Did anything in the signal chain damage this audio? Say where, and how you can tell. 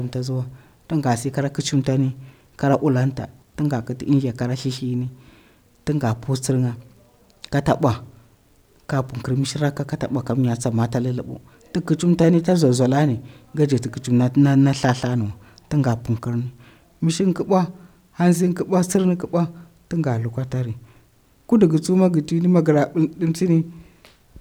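No, nothing in the signal chain has left audible damage on this speech recording. No stage, from capture through to playback, shows any harm a careful listener could point to.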